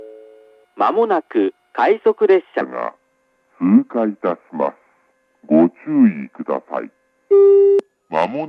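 From 2.61 s to the end, the sound drops into a wrong sample rate fault: everything runs at about 0.73 speed and sits roughly 5.6 semitones lower, slow and heavy together. That ratio fits 44.1 kHz material being played out at 32 kHz.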